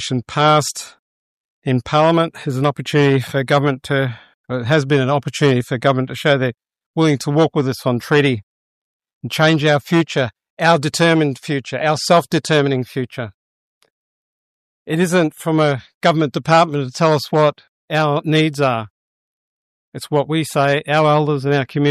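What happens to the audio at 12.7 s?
Nothing goes wrong at 12.7 s; the audio runs through that moment intact, with no dropout, click, glitch or other fault.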